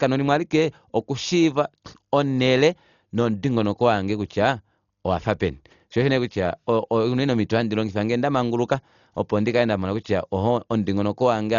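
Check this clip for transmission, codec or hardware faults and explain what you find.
One codec fault runs through the whole recording. The speech is likely damaged by Dolby Digital compression at a very low bitrate, fitting about 40 kbps. Nothing reaches above 7 kHz, and many frequency lines are left without bits and refilled with decoder noise, so the sound is dull, with a rough, fluttering haze around voiced tones.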